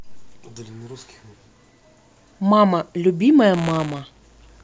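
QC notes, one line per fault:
3.53–4.63 s: buffer tearing. The program filling the ring buffer and the hardware reading it have slipped and cross inside each period. A small slice of every buffer replays sound roughly 15 ms old, with hard joins. This gives a robotic 125 Hz buzz, which fits a 128-sample buffer.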